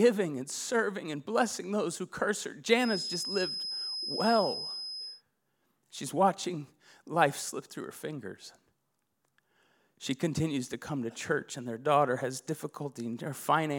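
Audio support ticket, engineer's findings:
Feedback whistle, 2.76–5.23 s. Thin steady tone at 5.1 kHz behind the speech, roughly 5 dB under it, level swelling and fading slowly. Likely loudspeaker-to-mic loop held at the edge of feedback: gain at 5.1 kHz just short of runaway, so the tone sustains without building. Check monitor placement and mic gain.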